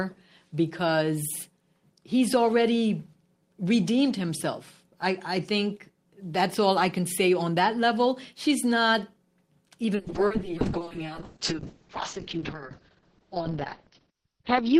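From 9.98 s to the end, a call bitrate drop from 32 to 6 kbps narrows the bandwidth from 20 kHz to 6 kHz. The speech turns muffled and watery, and the spectrogram goes empty above 6 kHz.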